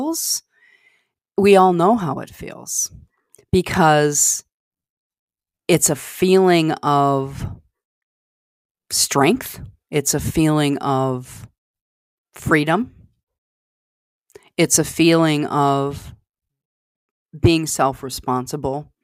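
Nothing in this recording stood out as a problem on listening.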